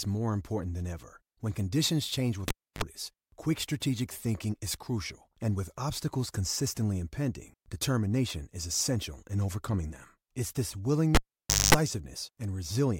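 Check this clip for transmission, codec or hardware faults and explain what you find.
Two hardware faults, both a cable pulled and plugged in. At 2.48 to 2.83 s, after "conditions change" and before "quick strategic thinking", a pop opens about 303 ms of near silence. Then comes a 47 ms burst of 50 Hz mains buzz while only the plug tip makes contact, and a second pop as the sound returns. At 11.15 to 11.75 s the same sequence recurs, with a 548 ms dropout and 225 ms of buzz.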